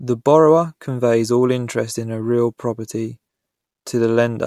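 Nothing in this bit of speech trips up the ear, with no glitch or damage anywhere to point to at any moment along the way.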